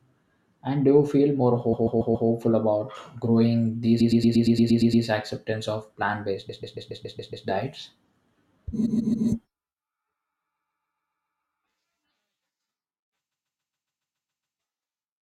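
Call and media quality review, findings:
Repeated frames: stutter at 1.72–2.28 s (after "do you feel more"), 4.00–5.04 s (before "acceptance of"), 6.48–7.46 s, 8.85–9.27 s, 10.57–11.40 s and 13.31–14.56 s. A 139 ms block (116 ms at 4.00 s) replays 3 to 9 times, so compressed frames were likely resent or rewritten upstream of the decoder, adding time to the clip. On the waveform this shows as identical tiled segments. On the spectrogram it shows as a repeating pattern.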